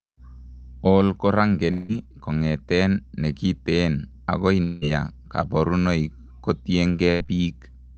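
At 1.71 s the speech stops being heard as speech and the last sound is stretched into a buzz or hiss that fades out over about 172 ms, ending at 1.92 s. When speech returns, about 160 ms of it is gone, and the patch adds roughly 9 ms to the length. The same thing happens from 4.63 to 4.85 s, with about 185 ms of fading fill replacing 160 ms of lost speech. After this second gap the timing shifts by about 30 ms. The likely cause of both is a long network dropout, where the receiver covers the silence by continuing the last sound until new audio arrives.

At 7.11 s a burst of packet loss removes about 80 ms of speech. The receiver continues the preceding sound and turns it down as the gap goes on, so the listener hears that sound fading away over about 88 ms, ending at 7.27 s. Speech then resumes further along, with the part in between missing and about 15 ms of extra length added by the concealment.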